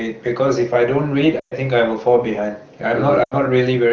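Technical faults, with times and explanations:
1.39–1.54 s: lost AMR speech frames. A gap of about 120 ms, which fits six 20 ms frames failing their checks. The decoder repeats its last good pitch and vocal tract settings at falling gain, so the sound drops to near silence within two frames before recovering weakly.
3.23–3.34 s: lost AMR speech frames. A shorter run of about 80 ms, likely four frames, with the same quickly decaying concealment. The surrounding wideband sound is clear, consistent with an AMR-WB mode at or above 12.65 kbit/s.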